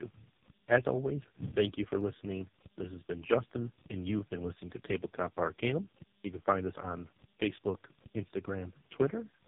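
From start to finish the speech carries tandem speech coding. It passed through three speech codecs in a row, AMR-NB at 12.2 kbit/s, GSM full rate, then AMR-NB at 5.15 kbit/s, with A-law links between, each coder reworking the previous one's errors. The result sounds rough, muffled and warbly. A spectrogram shows a hard ceiling at 3.7 kHz, smeared harmonics and blotchy formant energy. The waveform looks grainy, with softened onsets.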